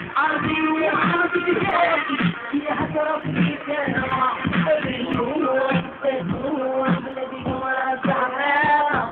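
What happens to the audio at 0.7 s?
At 0.7 s the sound sits inside three overlapping problems. The first is clock drift between sender and receiver: the sender's clock runs roughly 2 percent slow for the whole clip, so the receiver's buffer keeps draining. Unlike a single dropout, this causes small, unevenly spaced timing hiccups from start to finish rather than one isolated event.

The second is repeated timing corrections, which run from 0.06 s to 8.85 s. The receiver compensates by repeating short slivers of audio, all stretching in the same direction. Playback drops to 99 percent speed and about a tenth of a second is added overall. This comes across as a faintly unsteady tempo, not as pitch change or clicks.

The third is scattered short gaps, between 0.14 s and 2.62 s. About seven late or lost packets, none longer than roughly 10 ms, were patched by extending the preceding sound, filling around 40 ms in total. 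Nothing falls silent. Instead there are brief ticks or smears, isolated rather than the steady drift-driven pattern.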